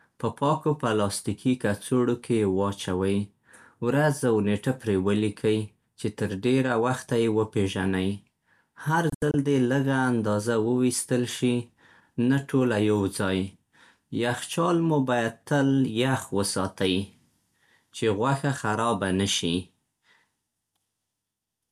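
At 9.10 to 9.34 s, a digital broadcast dropout: the receiver lost good frames and muted, leaving short silent holes, the longest 72 ms, just before "دې لږه اندازه".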